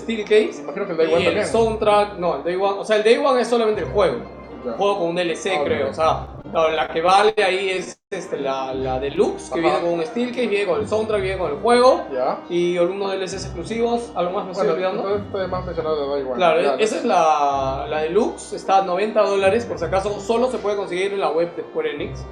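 The audio has two bursts of repeated stalls (stutter). From 6.25 to 7.39 s there are 15 short gaps, none longer than 83 ms, which the receiver covered by stretching out the last sound. From 7.75 to 8.14 s there are four more, one lasting 196 ms. About a quarter of a second is filled in each burst, so the sound drags and hiccups rather than losing anything. Packets were evidently arriving late enough to starve the jitter buffer. Right after that, from 9.21 to 10.80 s, there's a jitter buffer slow-down. Playback runs at about 94% speed with the pitch unchanged, as the receiver repeats tiny pitch-period slices to add 104 ms and rebuild its reserve, so things sound slightly drawn out. Then the buffer holds more than it aims for, and you get a jitter buffer speed-up from 12.77 to 15.94 s at about 105% speed, trimming roughly a fifth of a second. A smaller one from 19.43 to 20.24 s at about 104% trims only a few tens of milliseconds. 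Both run at the same pitch, and the first sounds a touch hurried.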